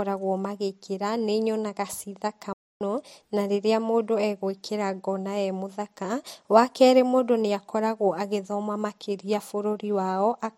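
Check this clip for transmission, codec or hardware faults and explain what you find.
One fault stands out in this speech clip: a playback stall.

From 2.53 s to 2.81 s the speech stops mid-flow and the output falls silent for about 280 ms. The player likely ran short of data or had its output thread blocked, so nothing reached the output until it recovered. A natural pause falls between phrases, but this one cuts the sound off partway through, and the silence ends with a resumption rather than with a new phrase.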